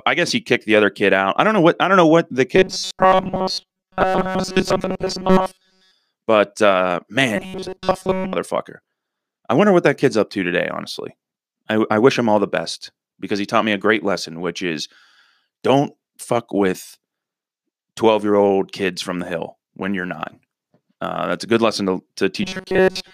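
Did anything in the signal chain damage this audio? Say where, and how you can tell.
Yes. Robotic sound from repeated short buffers appears at 2.56–5.91 s, 7.36–8.33 s and 22.43–23.14 s. The speech becomes a rigid metallic buzz at 188 Hz, suggesting a 5.3 ms chunk replayed while most real audio is skipped. The likely stage is a starved driver buffer.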